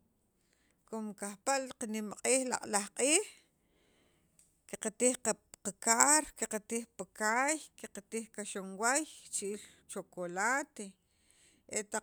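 Nothing stood out as a technical problem on listening to this speech recording.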